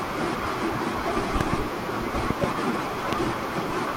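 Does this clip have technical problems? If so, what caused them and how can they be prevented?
Yes. Sharp loud pops jump out over the speech: double pops at 1.41–1.56 s and 2.30–2.46 s, and a single one at 3.13–3.15 s, peaking well above the speech, likely from voltage spikes such as a plug, switch or static discharge. Secure all connections, avoid switching equipment while recording, and ground the gear to prevent these pops.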